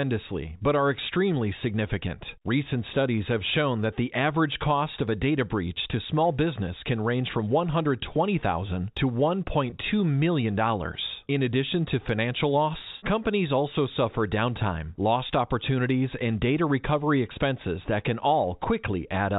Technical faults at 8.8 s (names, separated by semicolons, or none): none